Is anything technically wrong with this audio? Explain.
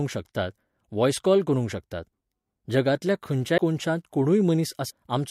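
Yes, this speech clip has compressed frames skipped, twice. At 3.57 s and again from 4.89 to 4.91 s, the audio jumps forward. About 150 ms goes missing at the first point, which suggests several frames, and about 400 ms at the second, which suggests about fifteen. Those frames were lost or the decoder rejected them.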